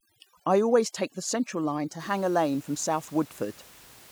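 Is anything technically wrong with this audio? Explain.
Yes. From 0.0 to 2.0 s the speech suffers from overdone noise removal. A denoiser pushed too hard shuts down individual frequency bands whenever they sit near its noise estimate, and it takes the quieter parts of the voice with them. The background drops and breaks up into twinkling specks. On a spectrogram, that stretch shows isolated dots in otherwise empty gaps and ragged, hole-punched harmonics. After 2.0 s, the room noise, about 26 dB below the speech, fills the background.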